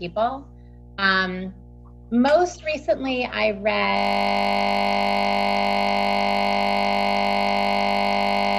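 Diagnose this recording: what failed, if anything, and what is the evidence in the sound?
Mains hum runs through the whole recording: a steady 60 Hz tone about 20 dB below the signal. This is an analogue wiring fault, most likely a ground loop or a nearby transformer coupling the power line into the signal path before conversion.

A system hang loop starts at 3.97 s and lasts to the end. A 20 ms slice repeats exactly, over two hundred times, producing a steady 50 Hz buzz. The driver or buffer stage froze while the hardware kept replaying the same short ring buffer.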